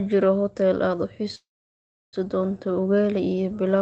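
At 1.35 s there's a call audio freeze lasting until 2.16 s, likely packets stalling and draining the jitter buffer. Mostly silence, then the speech resumes with nothing lost.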